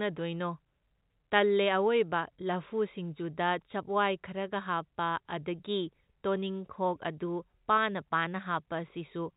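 No technical faults can be heard in this speech, which carries the narrow telephone band of G.711 A-law coding with nothing above 4 kHz.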